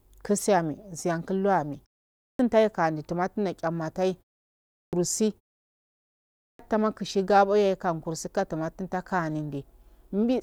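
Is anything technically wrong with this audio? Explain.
Yes. There is a clipped start after a pause three times: at 2.08 to 2.39 s, between "siyan kullo ame" and "tai kande jumatun ma"; at 4.60 to 4.93 s, after "kande jumatun ma tchanatai"; and at 6.25 to 6.59 s, just before "ama kushi gabo yaye". The output device sleeps during short gaps of 0.3 to 0.93 s and needs time to wake up again. About 310 to 340 ms of the returning speech is lost each time, so the speech bursts out of silence without its first sounds. The pauses also fall silent, but that muting alone costs no speech. What sets this fault apart is that the speech itself is cut off.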